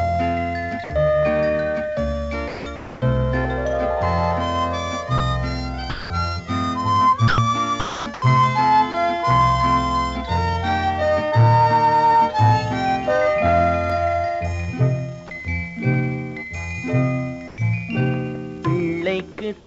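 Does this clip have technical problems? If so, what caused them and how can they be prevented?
Yes. Sound dropped by the voice detector occurs at 0.84–0.90 s, 5.18–5.20 s, 5.90–6.10 s and 8.92–8.94 s, losing 60, 20, 200 and 20 ms of sound. The sender's voice detector likely judged these quiet moments to be background and stopped sending, so the receiver filled each gap with steady comfort noise. On a spectrogram, each gap shows as a short, flat, textureless block where the detail breaks off. Raising the detector's sensitivity and adding hangover time would prevent it.

Sound chopped by the voice detector spans 2.48–3.02 s and 7.28–8.22 s, with 440 ms replaced in each stretch. The detector likely toggled between sending and muting several times, so quiet edges were swapped for synthetic fill. A waveform shows ragged on-off patches, and a spectrogram shows alternating detailed and smooth bands. 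Longer hangover and a less aggressive voice detector setting would prevent this.

A dropped buffer (overrun) occurs at 13.90 s. It is a slight jump where a sliver of a millisecond or two went missing. The program likely failed to read its samples before the hardware overwrote them, so the two sides were spliced directly. A waveform shows a sharp discontinuity with no silence, and a spectrogram shows a thin vertical broadband line. Larger buffers or higher capture-thread priority would prevent it.

Comfort noise in place of the background appears at 17.48–17.58 s and from 19.60 s to the end. Here the background sits about 25 and 28 dB below the loud parts. During these pauses the sender likely stopped transmitting, and the receiver substituted smooth synthetic noise. The first patch matches the real level, and the second is about 4 dB quieter. On a spectrogram, the background texture turns uniform, and the final patch looks slightly darker. 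Disabling discontinuous transmission would prevent this. The call path itself leaves nothing above 8 kHz, consistent with G.722 wideband coding.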